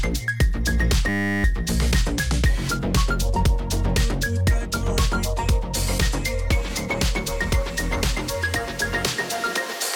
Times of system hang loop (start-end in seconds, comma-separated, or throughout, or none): 1.09-1.44